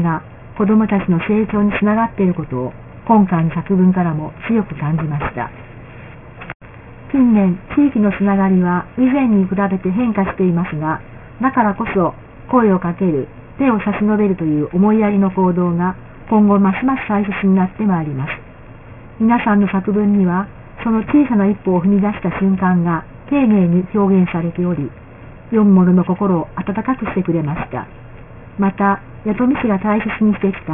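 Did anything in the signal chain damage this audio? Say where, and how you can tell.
Yes. The damage comes from sample-rate conversion and runs through the whole clip: aliasing. The top end sounds gritty and metallic. On a spectrogram everything stops hard at 3 kHz, and mirrored traces sit about 20 dB below the signal. That fits a drop from 48 kHz to 6 kHz without an anti-alias filter, so content above 3 kHz folded back to false pitches below it.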